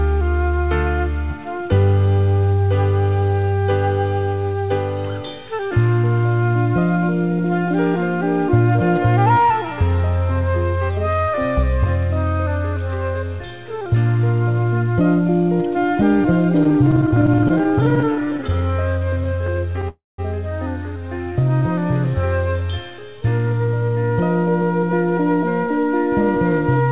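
From 16.64 to 19.84 s there are repeated stalls (stutter): many brief fills, each under about 14 ms, totalling 0.62 s, as the jitter buffer keeps running dry. Nothing is lost, but the sound drags. At 19.88 s a call audio freeze holds the last sound for about 0.3 s, fading to silence for its final 0.19 s before resuming at 20.20 s, likely from packets held up in transit. Throughout, the band stops at 4 kHz, consistent with G.711.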